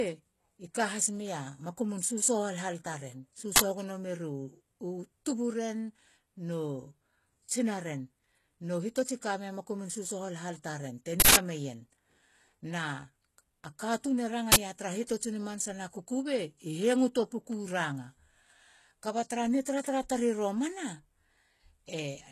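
Throughout the clip, the signal has likely passed through HE-AAC compression, at a rate that points to roughly 16 kbps. Only the lower spectrum is truly coded. The treble is rebuilt by copying lower bands upward and shaping them with a coarse envelope, and nothing reaches above 14.5 kHz. Because the rebuilt treble is not the original, its harmonics fail to line up with those below the crossover. The damage is plainly audible, and the high end of the speech takes on an artificial gritty, metallic or lispy edge.

At 3.56 s, 11.2 s and 14.52 s, an uninitialised buffer reaches the output. A block was played before any audio had been written into it, so leftover memory contents were read out as samples. The blocks at 3.56 s and 14.52 s last 40 ms each and are heard as a sudden crack. The one at 11.2 s runs 160 ms, to 11.36 s, and comes through as a burst of digital noise.

At 15.07 s, pre-echo appears. 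The transform codec spread its quantisation noise evenly across a whole block, and a sharp attack fell late in that block. The noise sized for the loud onset therefore also fills the quiet moment just before it, smeared over about 25 ms, until 15.09 s. A brief hiss is heard ahead of the attack, which itself sounds softened and smeared.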